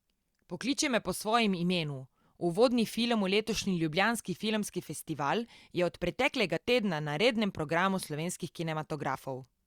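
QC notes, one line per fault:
6.57 s, dropped buffer (overrun): A jump lands between "festival je od preteklega" and "tedna na rednem programu". The sound jumps ahead with no gap. Roughly 30 ms is missing, so the two sides butt together. The likely cause is the capture program failing to collect a buffer before the hardware overwrote it.
9.15 s, dropped buffer (overrun): A shorter skip, with roughly 10 ms lost. It is likely the same overrun.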